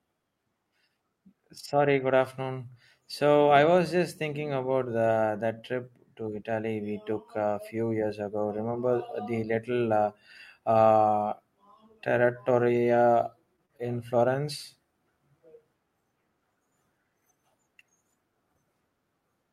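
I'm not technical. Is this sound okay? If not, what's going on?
No. Around 12.57, 12.61, 12.74, 12.90 and 12.94 seconds there is a lost packet rebuilt from error correction each time. Bits of the speech went missing in transit. A rougher backup copy was played instead, so each 20-millisecond moment sounds briefly grainy and noisy, not silent.

Soon after come three cases of short concealed packet loss, at 13.56, 13.66 and 13.77 seconds. About 20, 40 and 20 milliseconds of sound never arrived. The player guessed the gap by stretching the sound just before it. You hear a quick smear or wobble, and a tiny sound can drop out.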